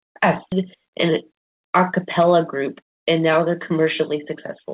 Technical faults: skip ahead; jitter buffer speed-up

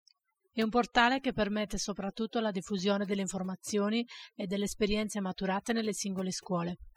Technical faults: overdone noise removal

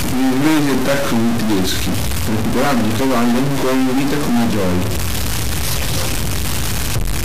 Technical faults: stuck bit

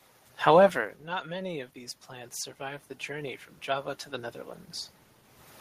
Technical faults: automatic gain rising

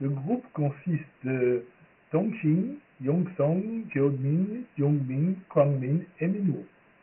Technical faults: Dialogic VOX ADPCM

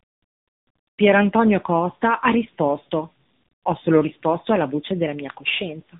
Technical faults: tandem speech coding

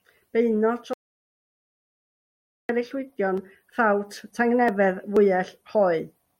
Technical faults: audio dropout to silence

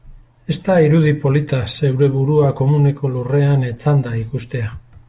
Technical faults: none

